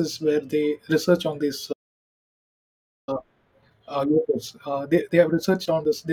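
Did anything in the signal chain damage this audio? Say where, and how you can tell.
Yes. At 1.72 s the speech drops to silence for about 1.35 s, resuming at 3.09 s. That's a playback stall, likely the player starving for data or getting blocked.

Right after, from 3.09 to 6.09 s, you get time-compressed catch-up at playback. It runs 1.15x fast at normal pitch, as small chunks get spliced out to drain the backlog.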